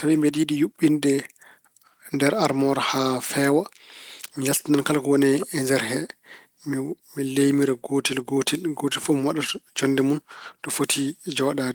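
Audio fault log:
No fault is logged for this speech clip.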